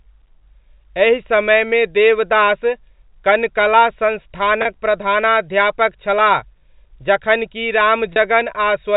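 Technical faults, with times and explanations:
4.62 s and 8.13 s, the second just after "जखन कि": packet loss with pitch repetition. Each time about 30 ms of audio drops out, fitting a single lost packet. The receiver replays the last pitch period to fill the gap, so the sound briefly holds a slightly buzzy tone before resuming over the G.711 telephone band.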